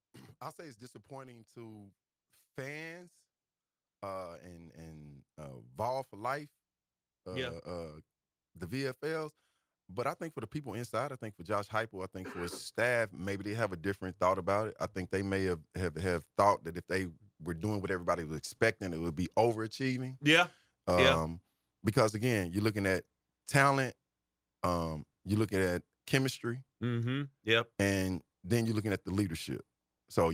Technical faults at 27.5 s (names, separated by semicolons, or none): none